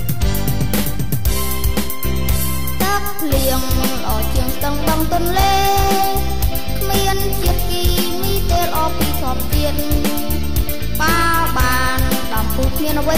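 A constant DC offset runs through the whole recording: something in the chain, most likely a converter or input stage with a bias it never removed, has added a steady voltage, so the waveform sits shifted away from zero at about -19 dBFS for the full length. You cannot hear the shift itself, but it shows as a fixed pile of energy at 0 Hz, eats into headroom on one side of the waveform, and can produce clicks wherever the audio is cut or faded.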